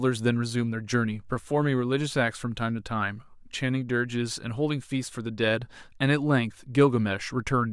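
Listening through the recording, nothing stood out as a technical fault at any point.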